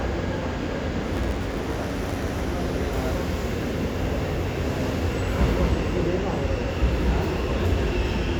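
From 1.13 to 2.42 s, a block size mismatch truncates each block's tail. A buzz near 92 Hz appears, and the sound runs 1.07 times fast with its timbre unchanged.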